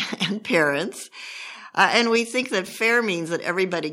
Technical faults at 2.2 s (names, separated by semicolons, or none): microphone volume stepped down